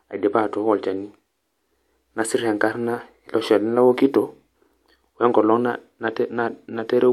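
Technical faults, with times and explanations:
Nothing stood out as a technical fault on listening to this speech recording.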